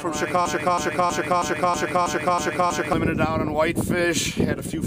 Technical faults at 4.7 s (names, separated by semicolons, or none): none